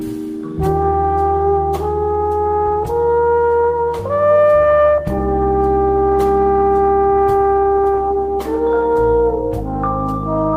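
Nothing here stands out as a technical problem; the audio just runs along without any glitch or hiccup worth pointing to.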